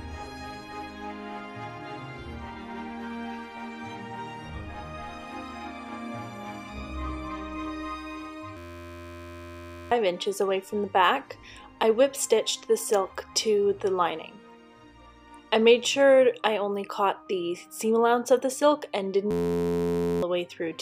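At 8.57 s the system stalls in a hang loop: the driver stops feeding new data while the hardware keeps replaying one tiny slice of its ring buffer. That 11.61 ms slice, which fits a 512-sample buffer, repeats until 9.92 s, producing a steady buzz at 86.1 Hz and swallowing around one and a half seconds of sound. The same system hang loop returns from 19.31 to 20.23 s, buzzing at the identical rate, with roughly a second lost.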